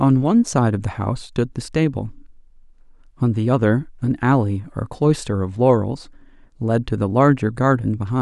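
Speech clip, no technical faults.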